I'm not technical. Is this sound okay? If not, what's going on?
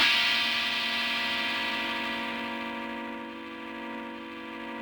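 Yes, no faults to hear.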